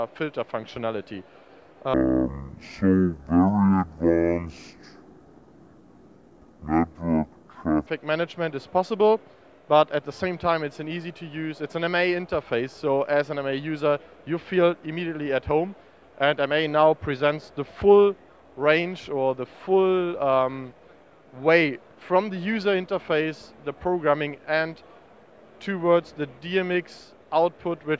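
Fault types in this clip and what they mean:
Wrong sample rate: from about 1.94 to 7.87 s the audio drops into slow motion, running at half speed and a full octave low (12 semitones down), with speed and pitch sliding together because nothing resamples it. That exact 2:1 ratio fits material captured at 32 kHz being played back as if it were 16 kHz, so everything in that stretch sounds sluggish, heavy and stretched out.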